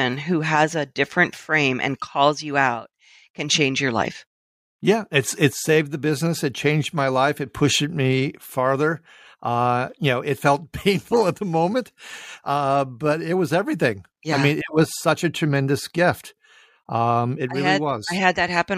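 Speech recording, no technical faults detected.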